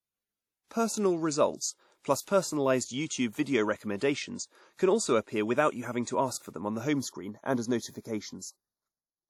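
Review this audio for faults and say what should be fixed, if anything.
The whole clip has plainly audible codec damage: washy, ringing speech with hiss that breathes along with it and nothing above 18 kHz. That's likely WMA compression at around 48 kbps, where quantisation noise smears across long blocks. Export lossless or at a much higher bitrate.

From 6.93 s to the end, right after "for them on the", it turns hollow and phasey. That's channel delay (comb filtering): one channel runs about 0.2 ms late, and summing to mono notches the sound from around 3 kHz. Align the channels before the mono fold-down.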